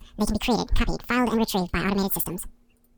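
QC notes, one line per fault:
throughout, wrong sample rate: audio that fits a 22 kHz recording plays at 44.1 kHz unconverted, so speech runs double speed, an octave high.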